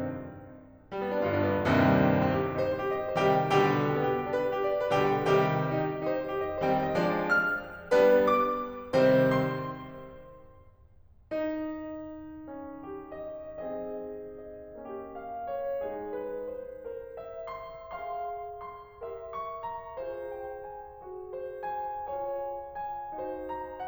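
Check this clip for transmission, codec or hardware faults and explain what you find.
Nothing to flag here, as the music carries on without any fault I can pick out.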